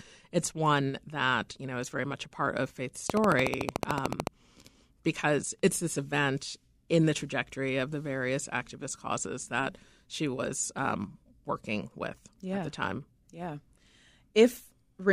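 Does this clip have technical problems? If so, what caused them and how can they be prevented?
Yes. From 3.10 to 4.28 s a train of clicks ticks over the speech, about fifteen closely matching pulses at a regular 13.6 per second, standing roughly 20 dB above the signal. Unlike random crackle, the even spacing and matching shape point to a likely cause in periodic interference or a faulty connection or power supply. Moving cables away from other equipment, or fixing a faulty connection or power supply, would prevent it.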